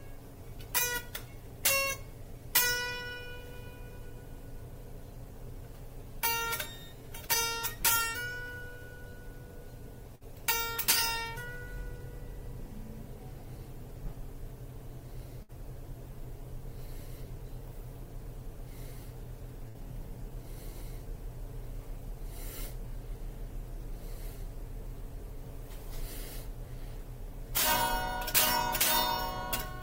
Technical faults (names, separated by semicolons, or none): burst of packet loss